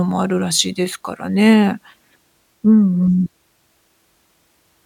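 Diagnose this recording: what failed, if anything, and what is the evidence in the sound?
Nothing in the recording points to a failure at any stage, from capture and conversion through to playback.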